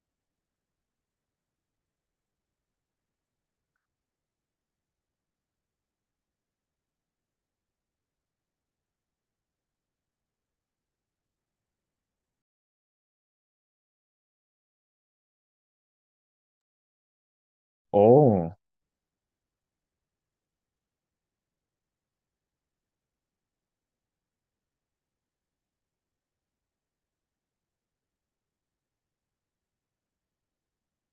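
Speech recording with no audible technical faults.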